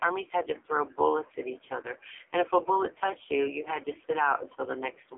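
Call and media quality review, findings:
AMR narrowband mobile codec, throughout. Band-limited speech, roughly 300 Hz to 3.4 kHz, nothing above 3.5 kHz. Heavy buzzy, synthetic texture from the vocal-tract model and sparse pulse excitation, consistent with a low AMR-NB mode near 6 kbps. Probable component: mobile voice leg.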